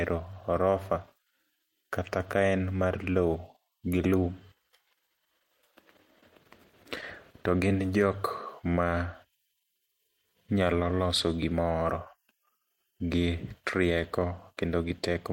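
Clock drift between sender and receiver runs through the whole recording of speech. The sending side's clock runs about one percent slow, so the receiver's jitter buffer keeps draining and must be padded to avoid running empty. Unlike random network jitter, which pushes timing both ways at once, this error builds steadily in one direction, so the disturbance it causes has a consistent lean rather than scattered stalls and rushes.

Repeated timing corrections are the audible result, heard from 0.34 to 4.56 s and again from 9.43 to 14.55 s. In each stretch the receiver repeats short pieces to make up for the slow sender, adding roughly 50 ms in total, so delivery runs at about 99 percent speed. The effect is a faintly dragging, slightly uneven tempo with small hiccups at irregular points. Packet-loss concealment also fills gaps with repeated material, but there each repair sits at a separate dropout and can be smeared or buzzy. 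Here the inserts are tiny, always lengthen the sound, and spread across the whole stretch.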